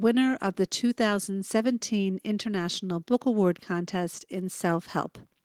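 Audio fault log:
Nothing stood out on listening to this speech recording.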